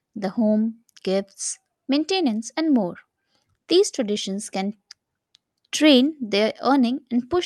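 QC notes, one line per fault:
No faults heard.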